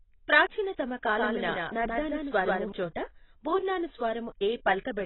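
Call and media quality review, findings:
Whole clip: dull, smeared speech, fizzy sibilants, nothing above 4 kHz. Likely heavy AAC compression lowering the cut-off, consistent with roughly 16 kbps AAC-LC.

1.16 to 2.72 s: doubled audio track. A dry second copy of the speech lags by around 150 ms, a few dB quieter, starting and stopping abruptly. Likely a duplicate capture path.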